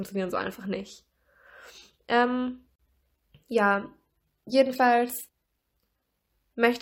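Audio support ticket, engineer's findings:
Gap at a join of encoded pieces, speech, 2.76 to 2.79 s: roughly 38 ms silence mid-utterance, edges smeared. Separately encoded segments concatenated untrimmed; encoder priming delay plus final-frame padding retained. Waveform: flat dropout; spectrogram: full-band vertical blank stripe.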